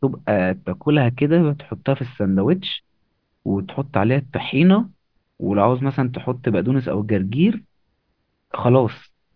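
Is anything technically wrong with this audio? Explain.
No, nothing technically wrong can be heard in this speech recording. There is no fault to point to at any moment in it.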